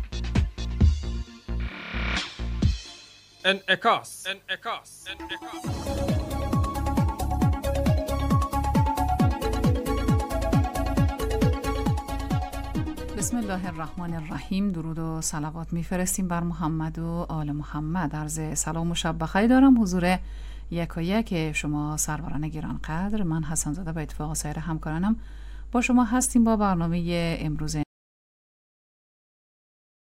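The input signal was likely lost, through a disconnected device or failed link, while recording continued. The result is an audio dropout to silence at 27.83 s: the sound cuts off abruptly and the last 2.2 s until the end are silent, with no room tone.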